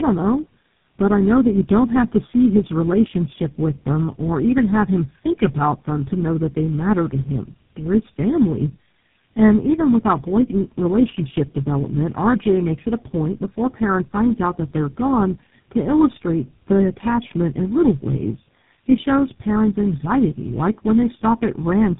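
Throughout, tandem speech coding leaves the speech rougher, more muffled and warblier than one low-rate codec could, suggesting four speech codecs in a row, with nothing above 3.8 kHz.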